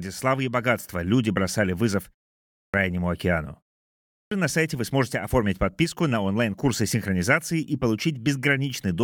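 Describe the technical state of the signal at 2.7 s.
A clipped start after a pause runs from 2.46 to 2.74 s. After a 0.4 s silence, the output device had gone idle and needed about 280 ms to wake, so that opening stretch of speech is swallowed and the talking resumes abruptly, missing its first sounds.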